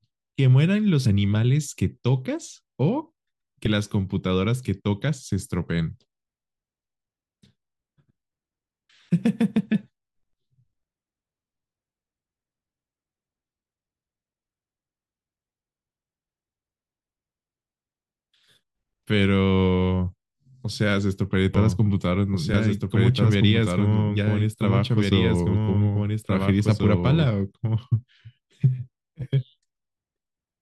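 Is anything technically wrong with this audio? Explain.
Yes, there are two kinds of problem here.

Damaged data in a compressed stream shows up twice, as short blips at 1.04 s and 3.65 s. Part of the encoded data was corrupted, so the decoder misreads a frame, loses its place, and hunts for the next valid frame header before picking up again. Each one comes across as a tiny glitch, a hiccup lasting only about 12 to 14 milliseconds.

The bigger issue is a doubled audio track running from 21.54 s to 27.28 s. A second, full-bandwidth copy of the speech trails the original by roughly one and a half seconds, sitting about 5 dB lower. It's likely a second capture through a slower path, or an edit that left two copies out of step. It sounds dry, with no reverb tail or room colour, so it isn't an echo. Instead you hear overlapping speech, and the copy snaps in and out abruptly at both ends.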